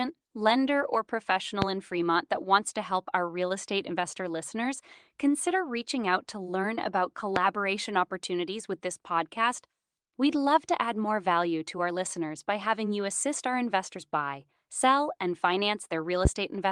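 A loud pop hits at 1.62 to 1.66 s after "lender or", at 7.36 to 7.40 s before "opportunities with this podcast", and at 16.25 to 16.29 s. Each is a single sharp thump standing far above the speech. It is likely a sudden voltage spike from a switch or static discharge.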